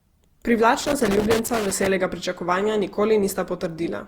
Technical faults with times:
0.00-4.07 generation loss
0.80-1.87 loose connector crackle

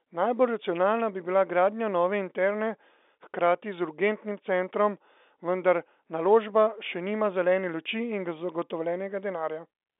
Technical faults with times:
none

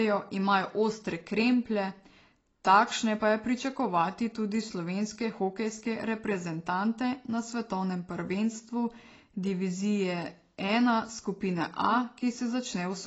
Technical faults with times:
0.00-13.06 AAC compression

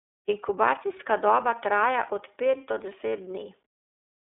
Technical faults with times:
0.00-4.37 iLBC codec

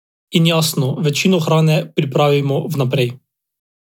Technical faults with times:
none

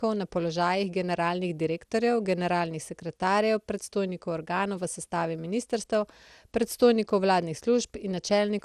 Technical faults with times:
0.00-8.65 generation loss

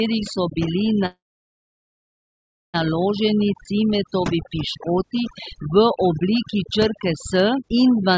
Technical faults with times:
0.00-8.18 overdone noise removal
1.06-2.76 call audio freeze

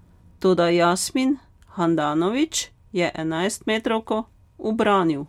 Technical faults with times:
none

